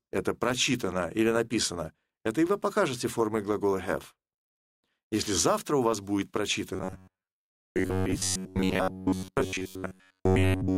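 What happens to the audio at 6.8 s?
New audio is likely arriving too seldom from about 6.74 s onward, so the playback keeps refilling the gap by looping the last fragment of roughly 10.7 ms while the real material is skipped. This robotic sound from repeated short buffers lasts to the end at 10.77 s, with most of the time filled by repeats. The looping locks the sound to a rigid metallic buzz near 93.8 Hz, which still loosely tracks the underlying audio.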